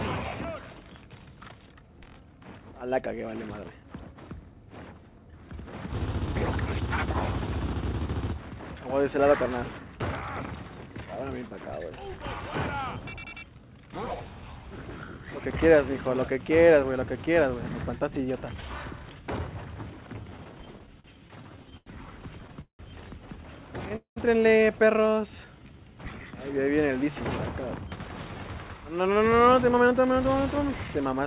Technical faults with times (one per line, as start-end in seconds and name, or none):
20.16-21.88 repeated stalls (stutter)
22.40-22.81 repeated stalls (stutter)
23.96-24.18 call audio freeze
25.15-25.79 jitter buffer slow-down
28.76-30.60 jitter buffer speed-up